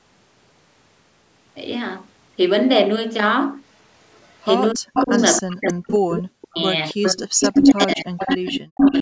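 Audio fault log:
4.74–6.61 s, speech suppressed in double talk: with both sides talking at once, the voice dips and breaks up, by about 40 dB at worst, likely because the echo canceller couldn't tell its talker from the loudspeaker echo.
4.95–5.42 s, echo leak: a copy of the voice comes back 277 ms late, only about 5 dB under the speech, likely the far end's speakerphone letting its mic pickup slip past the canceller.
7.02–8.34 s, echo leak: the same 277 ms delayed copy returns, quieter this time at about 10 dB below the speech, likely more loudspeaker pickup getting through uncancelled.
7.17–9.02 s, speech suppressed in double talk: the voice gets ducked and chopped again through to the end, dropping as far as about 40 dB, likely the canceller clamping down on both sides during overlap.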